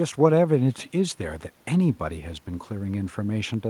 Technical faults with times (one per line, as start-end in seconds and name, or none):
none